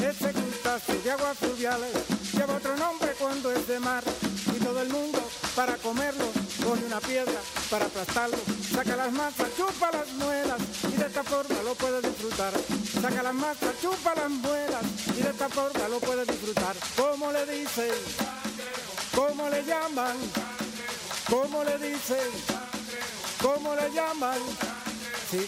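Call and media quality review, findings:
No findings in this call and media quality review.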